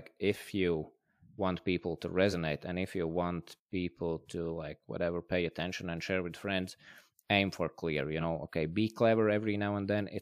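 Speech with compressed frames skipped three times. Just after "you want people to" at 2.30–2.34 s, about a frame of audio vanishes. After "and if you want" at 3.55 s, roughly two frames go missing. Following "aim for clear you" at 8.20–8.23 s, another single frame is lost. Each gap points to a frame of about 46 ms.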